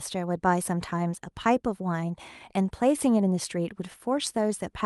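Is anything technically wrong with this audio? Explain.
No, nothing is technically wrong with this audio.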